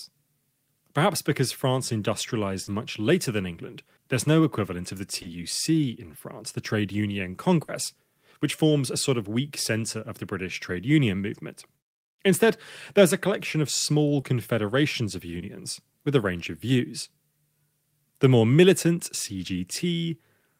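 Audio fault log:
2.63 to 15.42 s, short concealed packet loss: five brief gaps, at 2.63 to 2.71 s (just before "much later than"), 5.22 to 5.26 s, 7.64 to 7.70 s, 14.20 to 14.24 s (just after "a collection of small") and 15.38 to 15.42 s. Each gap is 20 or 40 ms of audio that never reached the decoder. The receiver extends the preceding sound and blends back into the real signal, so each one is heard as a quick smear or wobble. On a spectrogram, harmonics run unnaturally flat through each patch, or a noisy band looks too uniform, before the normal pattern returns. On the waveform, the repeated cycles look suspiciously regular.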